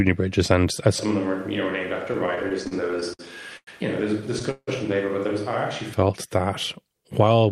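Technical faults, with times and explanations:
0.99–5.93 s, switch to a distant microphone: the sound suddenly goes roomy and hollow, thins out in the bass, and drops by about 10 dB, with room noise now sitting only about 25 dB under the speech. It snaps back just as abruptly at 5.93 s. That abrupt change in character points to the close mic's signal dropping out and the recording falling back on one much further away, likely a camera or room mic.
2.13–3.21 s, repeated stalls (stutter): the speech keeps catching and dragging, with 10 short hangs in about a second, the longest 56 ms and 175 ms in total, so roughly 16% of that stretch is filler. Packets were arriving late or too slowly, so the jitter buffer kept running dry and the receiver stretched out the last bit of sound each time. Nothing is lost, but the flow stutters and slows.
3.57–3.69 s and 4.51–4.69 s, call audio freeze: two brief halts where the last sound is held as a fading buzz and then goes quiet for about 70 ms, about 0.1 s of fill in the first and 163 ms in the second. 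The likely cause is packets stuck in transit, which emptied the jitter buffer. When they arrived, playback picked up where it had stopped, so the audio just gets pushed later and nothing is skipped.
7.23–7.52 s, jitter buffer speed-up: the last bit of speech comes out noticeably rushed, at about 113% speed with the pitch unchanged, and roughly 50 ms is trimmed out. The buffer had built up more audio than it aims to hold, as happens when delayed packets land in a bunch. To claw back that delay, the receiver cut out tiny pitch-period-sized slices one after another.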